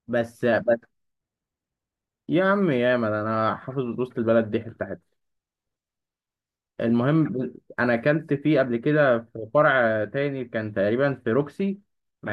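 Nothing technically wrong turns up anywhere in this bit of speech, so there's really nothing here to flag.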